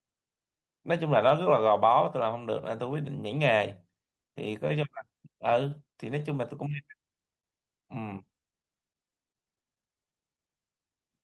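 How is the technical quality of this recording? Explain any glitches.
The recording has timing faults: the speech is carried with small, recurring tempo hiccups and one brief held sound, heard through a band-limited call path whose top end stops near 12 kHz, consistent with an Opus call codec around 32 kbps.

Clock drift between sender and receiver runs through the whole clip. The sender's audio clock runs about 3% slower than the receiver's, so the jitter buffer keeps draining and the receiver must pad the stream. On a waveform, the speech rhythm looks subtly uneven rather than steadily paced.

Repeated timing corrections occur from 0.57 s to 10.88 s. To make up for the slow sender, the receiver repeats short pieces, adding roughly 200 ms overall and playing at about 98% speed. They sound like slight stumbles or a faintly dragging tempo. A spectrogram shows occasional stretched or duplicated frames.

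A short stall from a late packet occurs from 1.29 s to 1.33 s. A packet arrived late, the buffer ran empty, and the receiver held the previous sound for about 15 ms before resuming where it left off. Nothing is lost, but a sound lingers too long. It appears as a brief flat, smeared band in the spectrogram.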